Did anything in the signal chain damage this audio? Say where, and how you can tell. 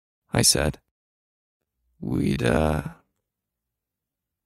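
Yes. From 1.46 s to the end at 4.46 s the speech abruptly slows to about 0.58 times its pace while the pitch holds, and it drags. That's a time-stretched section, likely from processing that repeated short chunks to pad the length.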